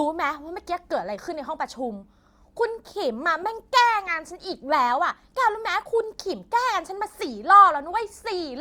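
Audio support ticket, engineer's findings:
Corrupt frame decoded: bit errors in compressed frames, decoder played them anyway. Misread gains/codes push energy to wrong frequencies. Short glitch at 1.35 s (roughly one frame); longer glitch 3.42–3.44 s, about two frames. Probable component: transport or storage feeding decoder.

Filter restarted on every block: filter state reset per block, each block starting from silence. Start-of-block transients give a buzz at 25 Hz from 7.6 s to the end, tracking speech level. Probable component: block-based filter stage dropping its history.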